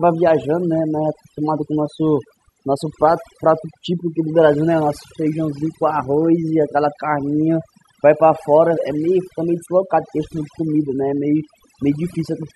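From start to end, the speech carries overdone noise removal. The noise reduction was set too aggressively for the noisy source, so individual frequency bands that sit close to the estimated noise floor are pulled far down or switched off entirely, and the quieter parts of the voice are cut along with the noise. The gaps between phrases fall to near silence with twinkling specks.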